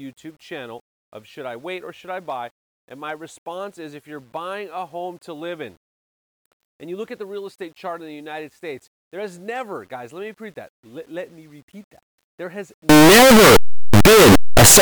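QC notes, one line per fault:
12.89–14.82 s, signed and unsigned mixed up: the closing stretch of speech becomes loud, harsh distortion, with quiet moments as loud as the rest. The likely cause is 8-bit samples read with the wrong sign convention, flipping the top bit so every zero crossing leaps across the full range.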